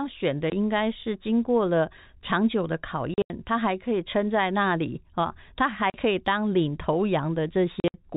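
Packet loss filled with silence punches holes at 0.5 s, 3.14 to 3.3 s, 5.9 s and 7.8 to 7.94 s. The gaps fit 20 ms packets, and they show as blank vertical stripes and flat waveform.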